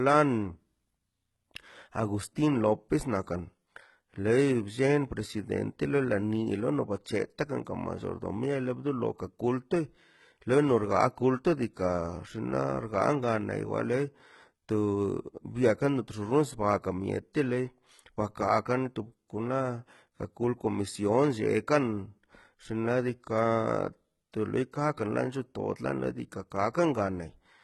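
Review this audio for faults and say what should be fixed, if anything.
The whole clip shows heavy codec damage consistent with HE-AAC compression, which is the likely cause. Nothing is present above 11.8 kHz, and the treble that remains is synthetic. Spectral band replication has copied lower bands upward under a coarse envelope, so the upper harmonics do not line up with the real ones below the crossover, and sibilants come out gritty and lispy. The degree of damage fits a bitrate around 16 kbps. To prevent this, encode the speech at a higher bitrate, or use plain AAC or a lossless format, so that the treble is coded rather than reconstructed.

Pre-echo appears at 7.04 s and at 24.32 s. At each point a brief hiss leads a sharp attack, spreading about 14 ms and 18 ms ahead of it respectively, and the onset sounds softened. The attack falls late in a transform block. The quantisation noise, sized for the loud portion, is spread across the whole block, including the quiet moment before the transient. 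To prevent this, use an encoder with working block switching or temporal noise shaping, and give it enough bitrate to switch to short blocks on transients.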